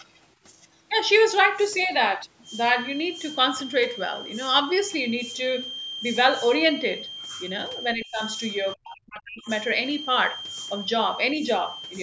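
Speech suppressed in double talk, from 7.94 to 8.21 s and from 8.74 to 9.49 s: the speech dips by about 30 dB, then about 40 dB, nearly cutting out. This is likely an echo canceller, during overlapping far-end talk, mistaking this talker's speech for echo and ducking it.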